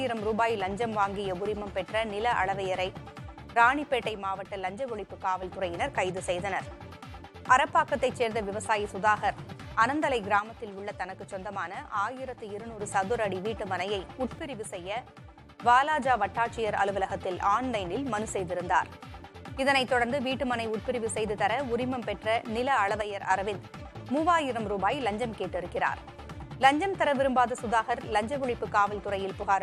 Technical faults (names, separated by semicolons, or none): one channel drops out